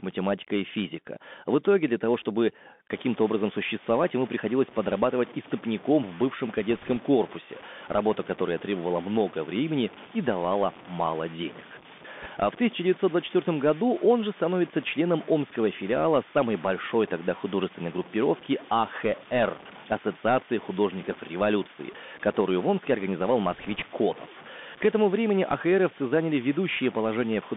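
Throughout, the speech sounds boxed-in and thin, held between about 200 Hz and 3.6 kHz, with scratchy s sounds and a granular hiss beneath it. This is the Bluetooth CVSD headset codec: a one-bit up/down delta modulator with an adaptive step, consistent with a 64 kbit/s headset link, whose step lags fast high-frequency detail.

From 2.90 s to the end, a gritty, signal-following graininess sits about 25 dB below the speech, roughest on quiet passages and sputtering as sounds fade. The likely cause is low bit depth without dither: truncation to around 6 bits, so the rounding error tracks the waveform instead of becoming steady noise.

Brief bursts of rushing crackle appear at 6.71 to 6.97 s, 12.22 to 12.27 s and 23.51 to 23.83 s, without sharp clicks. These are bit errors on a Bluetooth voice link. Roughly one to three percent of bits were flipped, and because each CVSD bit carries only a small step, every error fades quickly.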